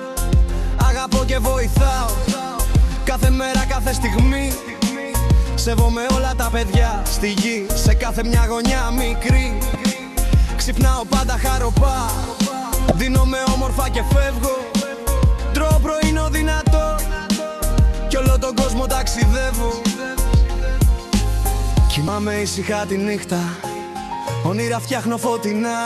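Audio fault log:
2.25–2.28 s, 9.72–9.75 s, 12.88–12.92 s and 22.05–22.08 s, damaged data in a compressed stream: four short bursts, each about 34 ms long, break into the sound as brief chirps or blips. At each point the compressed bytes are corrupt, so the decoder misreads the frames there, loses its place in the stream and has to search for the next valid frame header. Meanwhile it outputs a garbled fragment instead of the intended audio.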